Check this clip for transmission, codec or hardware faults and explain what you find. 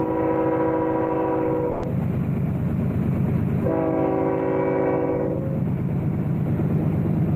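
One fault is present. A burst of packet loss runs from 1.71 to 1.85 s. A short run of packets failed to arrive in time, so the receiver filled about 120 ms by extending the last sound it had and fading it down across the gap. Playback then picks up again with roughly 120 ms of the original audio skipped. It is heard as a brief smeared, dimming hold with no true silence, followed by an abrupt jump forward.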